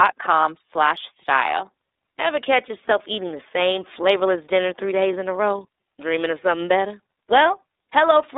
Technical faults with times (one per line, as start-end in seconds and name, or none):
0.00-8.38 iLBC codec